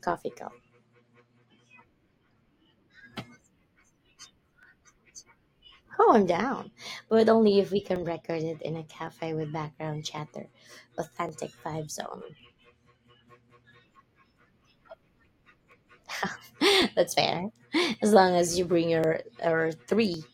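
Two clocks that likely disagree by something on the order of 0.1 percent leave the buffer between them drifting until it overflows or runs dry, and a small block of samples, a few dozen or so, is dropped or repeated. These clock drift buffer slips recur every 1.11 s from 0.20 s to 20.14 s, about twenty in all, each heard as a brief click or pop in the speech.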